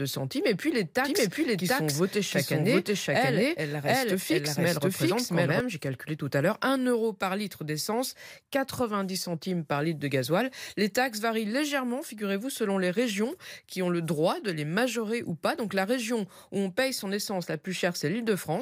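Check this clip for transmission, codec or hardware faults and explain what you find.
There's one fault here, a doubled audio track, running from 1.04 s, just after "centimes et puis les", to 5.60 s, just before "j'ai calculé tout à". A second full-band copy of the speech trails the original by around 0.7 s at roughly the same level, with no decay or room colour, so it sounds like a clean echo. It starts and stops abruptly. The likely cause is the signal being picked up again through a slower path.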